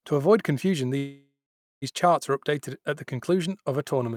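After "avoid confusion", a call audio freeze runs from 0.97 to 1.84 s: a fading buzz, then about half a second of silence, likely from a drained jitter buffer, before "charts are updated at" resumes intact.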